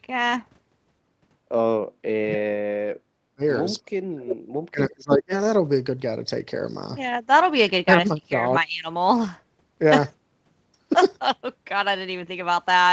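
From 1.72 to 3.42 s, both ends were likely talking at once and the echo canceller, unable to separate this talker from loudspeaker echo, suppressed both. This speech suppressed in double talk drops by as much as about 40 dB over roughly a second and a half. It returns at 3.82 to 4.32 s and again at 4.68 to 5.32 s, each time for about half a second with dips near 35 dB. Between those, at 4.29 to 4.37 s, a canceller likely left residue behind, and that echo leak brings back a brief delayed copy of the sound 325 ms late, about 10 dB below the direct speech, a short scrap overlapping the end of the second dropout.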